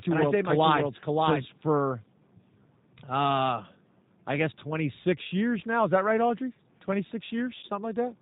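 From start to finish the speech passes through the G.729 codec at 8 kbit/s, rebuilt from a vocal tract model and a few pulses per frame. Everything above 4 kHz is gone, and the voice sounds plainly rough and synthetic throughout.

From the very start until 1.46 s, a second full-band copy of the same audio runs about half a second behind the first and about 5 dB quieter. It has no reverberant tail, and it cuts off abruptly. This is a doubled audio track, likely from the signal being captured twice along paths of different delay.

At 7.59 to 7.65 s, VoIP packet loss concealed by the speech codec takes out about 40 ms of audio, which fits four lost 10 ms frames. The decoder stretches the last sound into a fading buzzy tone or coloured noise, and the voice stays weak or distorted briefly after packets resume.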